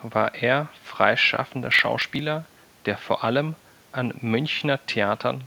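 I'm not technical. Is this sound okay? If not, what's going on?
No. From 1.66 to 2.19 s the speech is broken up by processor overload crackle: the computer fell behind and skipped about twenty tiny slices of audio, which fits buffers of roughly 5 ms. Each gap has hard edges, so together they sound like gritty tearing.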